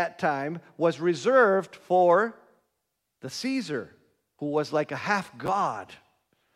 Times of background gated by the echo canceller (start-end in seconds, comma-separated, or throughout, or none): none